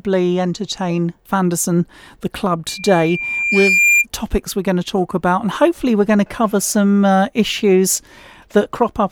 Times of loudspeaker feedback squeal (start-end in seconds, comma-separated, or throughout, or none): 2.68-4.06